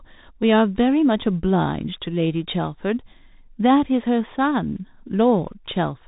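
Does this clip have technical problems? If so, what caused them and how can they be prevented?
Yes. Bluetooth CVSD headset codec damage runs through the whole speech clip. Nothing passes above about 3.8 kHz, and the one-bit, 64 kHz delta coding with adaptive step size leaves scratchy sibilants and granular hiss under the speech. Recording through a wideband or wired microphone path prevents this.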